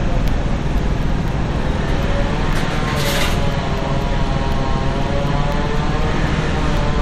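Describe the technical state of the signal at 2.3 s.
At 2.3 s the sound carries evenly spaced ticks, one every 0.25 s, part of a run from 0.28 s to 6.77 s. These are periodic USB or driver dropouts: something stalls the bus or driver at a fixed interval, blanking a sliver well under a millisecond with silence each time.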